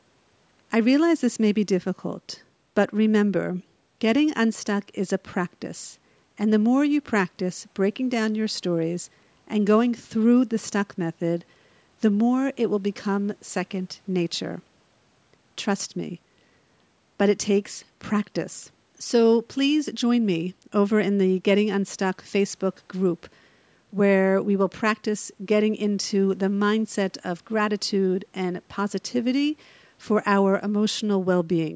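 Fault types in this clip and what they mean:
No technical faults detected.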